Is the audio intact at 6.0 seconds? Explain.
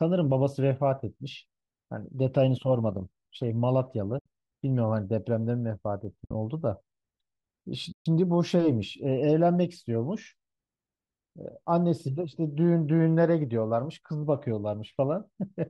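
No. At 6.05 s there is a single sharp click in the speech. It is likely dropped samples, a tiny fraction of a millisecond missing from the stream. The waveform jumps straight to a later value. Nothing audible is lost, only that click.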